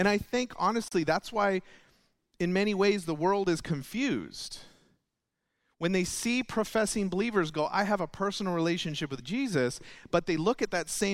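At 0.88 s, right after "I think", the speech drops out for about 33 ms, until 0.92 s. This is a gap at a join of encoded pieces. Two sections were encoded separately and then joined untrimmed. The encoder's start-up silence and the padding on the last frame both stayed in. The codec smears the edges of the silence, so the fully silent part is shorter. The speech then resumes exactly where it stopped, with "that's why".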